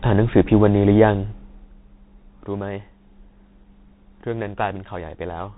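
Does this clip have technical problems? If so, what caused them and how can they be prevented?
Yes. Bluetooth CVSD headset codec damage runs through the whole clip: the speech is cut off above about 3.8 kHz, s sounds turn scratchy, loud bright moments distort as the one-bit-per-sample step size fails to keep up, and a granular hiss sits underneath. This fits a 64 kbps narrowband headset link. To prevent it, record through a wired microphone or a Bluetooth headset using a wideband speech codec.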